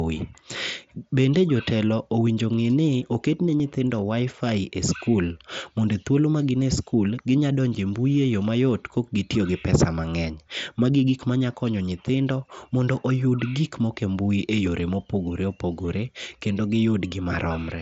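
At 3.59 s, concealed Bluetooth headset packet loss fills roughly 15 ms with repeated waveform, which fits two dropped frames. It shows as a brief periodic patch on the waveform and steady, evenly spaced harmonics on a spectrogram.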